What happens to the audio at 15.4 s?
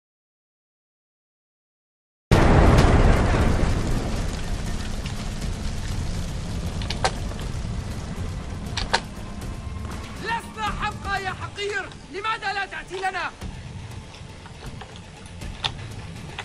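Nothing goes wrong at 15.4 s; the audio plays through that moment intact, with no dropout, click or other fault.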